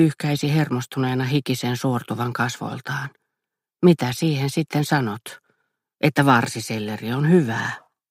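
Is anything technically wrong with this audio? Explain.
Yes. A block size mismatch, truncated, runs throughout. Each block's tail is discarded, causing a buzz near 92 Hz. Playback speed stays essentially unchanged.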